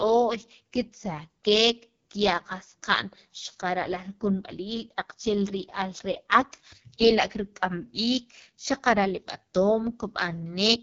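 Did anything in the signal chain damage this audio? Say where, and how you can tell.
Yes, the codec stage did, and it's there for the whole clip: this is the AMR wideband (HD Voice) codec run at a very low rate. The speech has a rough, raspy, buzzy grain throughout, and nothing sits above 7 kHz. The model-based coder only really describes the band up to 6.4 kHz and pads the top with shaped noise. That much roughness fits the lowest 6.6 kbit/s mode, which is starved of bits for the excitation pulses.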